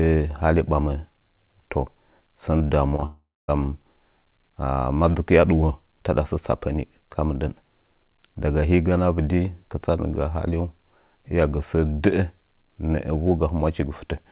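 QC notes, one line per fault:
2.58–3.04 s, repeated packet loss (robotic sound): four short holes, longest about 21 ms, each patched by extending prior audio, giving choppy breakup across about 18% of the span.
3.06–3.50 s, long network dropout: roughly 0.42 s of audio missing, concealment buzz or hiss fades into about 0.24 s of silence; likely a sustained network outage before sound resumes.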